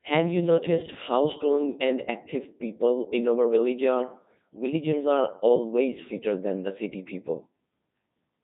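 From start to finish the speech has been through a Codec 2 vocoder, heavily: sine-wave resynthesis from pitch and envelope alone, robotic and buzzy, consistent with roughly 2.4 kbit/s.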